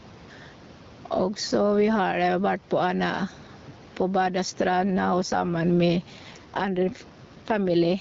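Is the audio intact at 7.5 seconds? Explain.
No. From 4.85 s to 8.00 s an AMR rate drop is in effect. The codec has stepped down to a lower mode and gives more of its bits to error protection, which fits a fall from 12.65 to 8.85 kbit/s. The bandwidth stays the same and there is no gap, but the speech sounds rougher and more synthetic.

Gain pumping also runs through the whole clip. The level swings by around 10 dB, so loud and soft parts end up closer in level and the sound is squashed. The likely cause is input gain set too high, with a fast limiter pulling it down on every peak.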